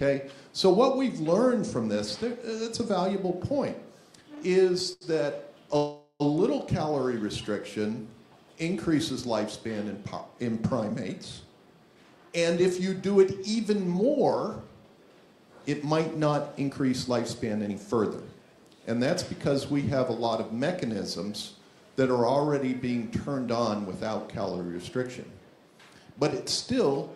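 The audio has three kinds of playback-timing fault. At 4.93 s there is a short stall from a late packet: the last sound is held for about 83 ms, showing on a spectrogram as a horizontally smeared band before the audio resumes. A call audio freeze runs from 5.77 to 6.22 s, likely from delayed packets emptying the jitter buffer. The final sound continues as a fading buzz for about 430 ms with a brief silent dip, showing as a decaying smear before the audio carries on. Jitter buffer speed-up runs from 11.44 to 17.95 s at about 107% speed, removing roughly half a second, and from 20.87 to 21.59 s at about 105%. The audio sounds hurried there while pitch lines stay at the same height, and events on the spectrogram sit closer together.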